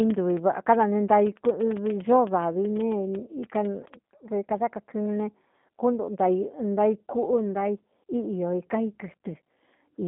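Throughout, the speech carries G.729 codec damage, a rough, synthetic buzz from pulse-coded rebuilding, which fits an 8 kbit/s stream. This buzz, not the 150 Hz to 3.5 kHz band limit with nothing above 3.7 kHz, separates it from a clean narrowband line.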